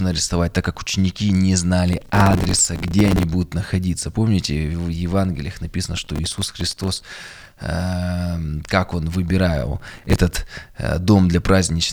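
Processor overload crackle tears through the speech at 1.93–3.23 s, after "так как ученики не", at 5.97–7.63 s, before "эм как он", and at 9.76–10.19 s. Dozens of missed deadlines on buffers of a few milliseconds each replay stale audio with hard edges, causing sustained gritty tearing rather than one isolated click or dropout.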